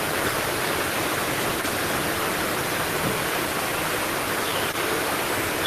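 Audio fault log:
No faults heard anywhere in the speech.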